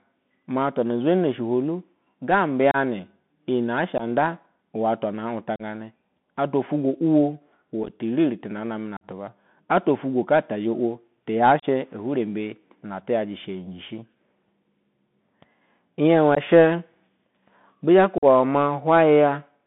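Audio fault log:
Throughout: Bluetooth CVSD headset codec. The call runs over a narrowband CVSD link, which codes the waveform as a single up-or-down bit per sample at 64 kHz with an adapting step size, and the line passes only about 150 Hz to 3.6 kHz. The speech therefore sounds boxed-in and dull, sibilants turn scratchy where fast high-frequency movement outruns the step, and a granular hiss sits under the speech.
2.71, 3.98, 5.56, 7.83 to 7.90, 8.97, 11.60, 16.35 and 18.18 s: unconcealed Bluetooth headset packet loss. Voice packets between headset and phone went missing and nothing filled the gap, so the speech drops into abrupt holes of 15 to 45 ms, which fits a handful of few-millisecond packets each time. At 7.83 s the 30 ms lost is broken into short bits spread over 60 ms, giving a brief rough crackle instead of one clean gap.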